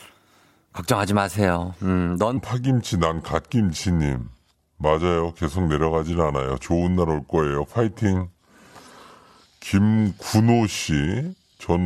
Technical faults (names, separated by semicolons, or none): section at the wrong speed